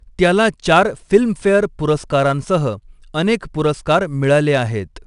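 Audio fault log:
Throughout: 4-bit ADPCM compression. Each sample of the speech is coded as a coarse 4-bit step from a predicted value, and the quantiser's step size adapts with level. The leftover error rides on the signal as a gritty, level-following hiss, plainly audible on louder syllables, with roughness on sharp onsets where the step size lags. Nothing is present above about 10.6 kHz, which fits a sample rate near 22 kHz and a bitrate around 89 kbps.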